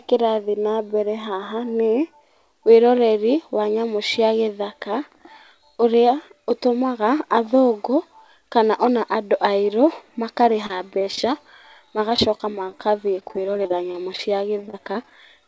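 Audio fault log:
10.42–11.24 s, 11.87–14.19 s and 14.61–15.11 s, repeated packet loss (robotic sound): after "kana ona andũ airũ", the speech breaks into rapid short holes of up to 31 ms. Each is filled by extending the last sound, so 11–20% of each stretch becomes choppy.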